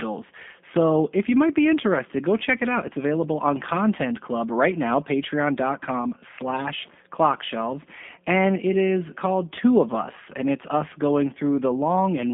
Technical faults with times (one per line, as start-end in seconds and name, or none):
0.00-12.34 G.729 codec